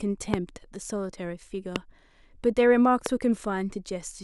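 Speech with three loud pops, at 0.34–0.36, 1.76–1.78 and 3.06–3.08 s: tall waveform spikes and thin broadband spectrogram stripes, likely from voltage glitches.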